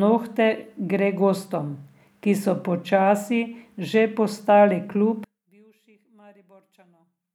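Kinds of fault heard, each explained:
One channel inverted: from 5.24 s the speech sinks about 34 dB instead of cutting out, likely from reversed polarity cancelling in mono.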